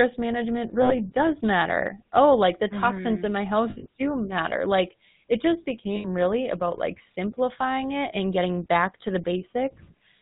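GSM full-rate codec damage runs through the whole of this speech clip and is plainly audible, which fits the 13 kbps full-rate GSM codec. It rebuilds the voice from a vocal-tract model driven by evenly spaced excitation pulses, keeping only one excitation sample in three. That thin excitation gives a buzzy, gravelly roughness, and nothing above 4 kHz gets through, so the sound is dull and band-limited. Lost GSM frames occur at 0.82 to 0.95 s, 3.70 to 3.86 s and 5.96 to 6.06 s. The first and third gaps each fit about four lost 20 ms frames, around 80 ms of missing audio. The middle one fits roughly six lost frames scattered over 160 ms, with the longest unbroken run around 70 ms. When a frame goes missing, the decoder keeps reusing the settings of the last good frame, so the sound is held as a rough, metallic ring instead of continuing naturally.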